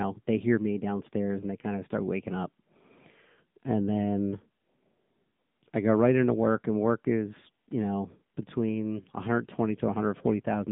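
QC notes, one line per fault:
Throughout: AMR narrowband mobile codec. The speech sits in a telephone band of roughly 150 Hz to 3.7 kHz, with nothing above 3.8 kHz. At 7.95 kbps the pulse-driven vocal-tract model leaves a plainly buzzy, synthetic edge, unlike a simple low-pass filter, which would keep the voice smooth.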